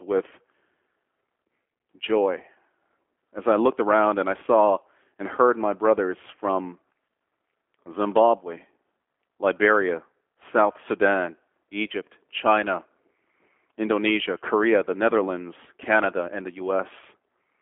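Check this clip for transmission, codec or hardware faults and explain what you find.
One codec fault runs through the whole recording: the speech has passed through a G.729 codec, the G.729A variant.

From start to finish, the encoder has discarded the original waveform and rebuilt each 10 ms frame from a vocal-tract filter, a pitch predictor and a handful of pulses. The data rate this implies fits an 8 kbit/s link. Nothing survives above about 3.5 kHz, and the line band runs from 250 Hz to 3.4 kHz. The speech sounds plainly rough and synthetic, muffled and thin.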